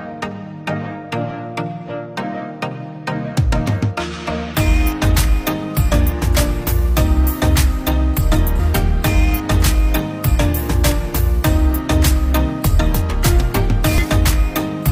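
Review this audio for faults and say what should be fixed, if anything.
There's damaged data in the compressed stream at 8.55–8.60 s and again at 13.98–14.05 s. Each is a short glitch where corrupted bytes throw the decoder off its frames until it resyncs on the next header. To fix it, re-fetch or re-encode from a clean source and checksum the file in transit.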